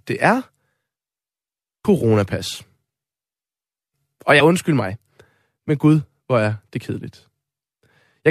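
At 1.84 s and again from 4.39 to 4.41 s, the speech breaks into a short blip from damaged data in a compressed stream: corrupted bytes make the decoder misread those frames and lose sync until it finds the next valid frame header.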